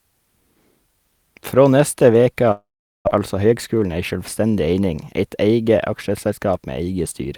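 From 2.51 to 3.09 s the speech breaks off, and a fading buzz gives way to silence. This is likely a long network dropout; about 0.4 s is lost.

From 3.19 to 4.81 s a jitter buffer speed-up trims pitch-period slices. Speech runs about 8% faster at unchanged pitch, recovering roughly 150 ms of delay.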